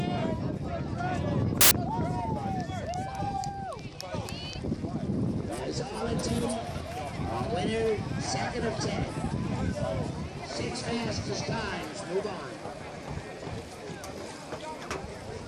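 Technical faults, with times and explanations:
1.61 to 1.71 s, file tags played as audio: an embedded cover picture is read as samples. Its compressed data gives a hard-edged burst of very loud white noise.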